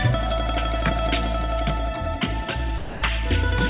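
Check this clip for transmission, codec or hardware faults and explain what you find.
One fault stands out, against a call path whose band stops at 4 kHz, which fits narrowband G.711 telephone coding. Sound dropped by the voice detector, from 2.78 to 3.02 s: for about 240 ms the audio gives way to a steady, featureless noise floor and then resumes. The likely cause is the sender's voice activity detector mistaking this stretch for background and stopping transmission. The receiver filled the gap with generated comfort noise, so the original sound there is lost.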